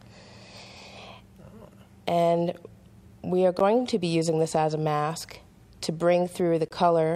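Gaps at joins of encoded pieces fall at 3.59 s (10.6 ms) and 6.68 to 6.71 s (23.7 ms). Leftover encoder delay and padding notch the waveform, leaving thin vertical blanks on the spectrogram.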